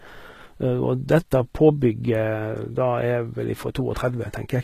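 From start to finish, the speech carries plainly audible codec damage, likely from HE-AAC compression at a low bitrate, around 20 kbps. The treble is rebuilt by copying lower bands upward. S sounds turn gritty and lispy. Nothing remains above 14.9 kHz.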